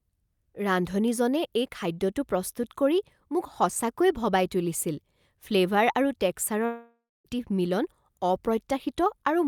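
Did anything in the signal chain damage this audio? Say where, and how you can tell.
Yes. From 6.65 to 7.27 s the speech stops and the last sound is stretched into a fading buzz, which decays into about 240 ms of near silence before the speech resumes. Roughly 600 ms of material is gone rather than delayed, which fits a long network dropout, likely in transport, where the receiver's concealment ran out of anything to extend. A brief packet loss would leave only a tiny smeared patch, and a mute or gate would cut cleanly without that decaying synthetic tail.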